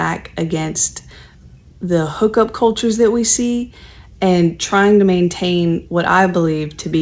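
Nothing goes wrong anywhere in this bit of speech, and the only thing to notice is the ordinary call-line character, with everything above about 8 kHz gone, just as you'd expect from a wideband call codec doing its normal job.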